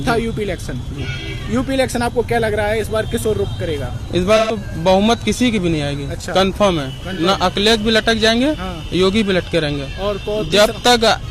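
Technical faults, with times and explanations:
4.36–4.56 s, 7.13–7.20 s and 10.46–10.52 s: AAC frame loss with concealment. Missing frames are refilled from the last good spectrum, giving smeared, noisy patches. The first gap fits three frames, the others one each. A spectrogram shows blurred, flattened bands.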